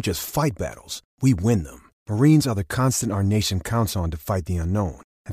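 No audible technical faults.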